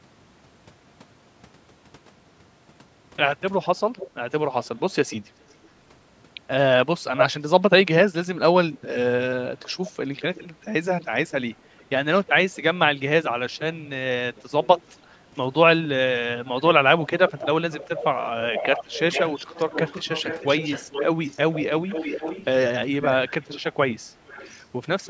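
Speech with an echo leak. A delayed copy of the voice comes back at 3.62–5.68 s, 7.17–7.26 s, 9.86–10.46 s, 11.79–11.83 s, 13.59–14.99 s and 16.45–25.08 s. It trails the voice by roughly 0.4 s, drifting from 405 to 449 ms. Its level varies. It is near full strength at 7.2 s, barely audible at 11.8 s, and fairly loud from 16.45 s to the end. The likely cause is a loudspeaker on the other end whose echo canceller let its microphone pickup return.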